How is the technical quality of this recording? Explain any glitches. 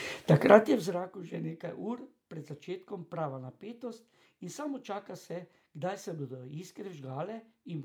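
No glitches can be heard.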